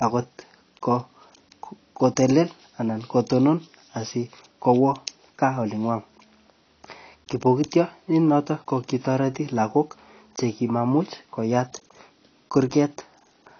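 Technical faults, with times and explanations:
Throughout, AAC compression. Nothing is heard above 6.6 kHz. The speech sounds dull and muffled, with its top band simply missing. Sibilants turn fizzy and smeared. Sustained vowels carry a warble. The damage is plainly audible. The likely cause is AAC-LC coding at a low bitrate, and the sound fits a rate near 24 kbps. At that rate the encoder drops its cut-off and quantises each frame coarsely, leaving spectral gaps.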